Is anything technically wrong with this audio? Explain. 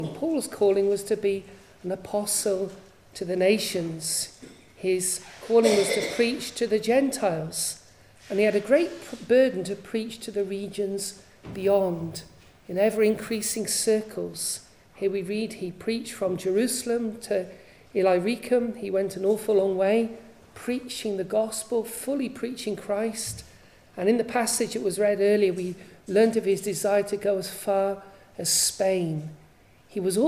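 Yes. From 11.53 to 13.58 s there is crude rate conversion: the sample rate was raised by simply repeating the nearest existing sample rather than filtering, which fits a step from 32 kHz to 48 kHz, where every second input sample is used twice. That uneven repeat pattern adds distortion around 20 dB below the signal, heard as a gritty, inharmonic fizz riding on louder and brighter parts of the sound.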